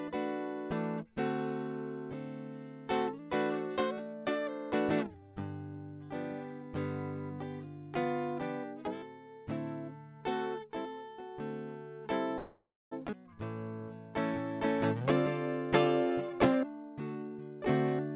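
At 12.38 s the music stops moving forward and a call audio freeze takes over until 12.93 s. The likely cause is delayed packets draining the jitter buffer, so the receiver stretched the last sound into a fading buzz. It dies to silence for its final quarter second, then the music resumes where it left off with nothing lost. A spectrogram shows smeared, repeating bands decaying into a blank strip about 250 ms wide.

A skip ahead follows at 13.11 s. Once the late audio arrived, the receiver dropped roughly 0.4 s of music to recover the added delay. It bridged the jump with only about 11 ms of fill, so the music lurches forward almost seamlessly, with a short stretch of the music cut out. On the waveform the two sides butt together with a tiny seam. On the spectrogram, harmonic lines break and restart at different positions rather than continuing.

From 16.10 s to 17.45 s a jitter buffer speed-up tightens the timing. 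The receiver removed pitch-period-sized slivers over and over, amounting to about a fifth of a second, to shrink a surplus in the buffer. The music plays about 15% fast at unchanged pitch, so the tempo visibly rushes. On a spectrogram, onsets crowd closer while harmonic spacing stays constant. Throughout, the narrowband call path leaves nothing above 4 kHz.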